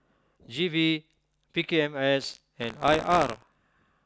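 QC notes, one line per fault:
2.21–3.56 s, buffer tearing: the ring buffer's writer and reader have crossed, so a small slice of each period replays audio from about 70 ms earlier. This gives a robotic 62.5 Hz rattle that fits a 256-sample buffer. The waveform shows hard joins every 16 ms, and the spectrogram shows regular vertical stripes.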